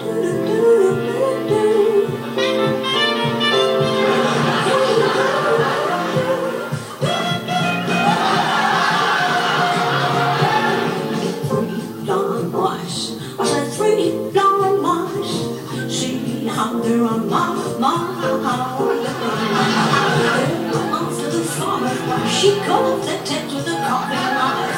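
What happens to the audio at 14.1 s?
At 14.1 s there is a steady, thin hiss that climbs sharply toward the top of the band, present for the whole clip. This is low bit depth with noise shaping: the audio is held to 9 bits, and its rounding error is pushed up in frequency, leaving hiss roughly 30 dB below the signal.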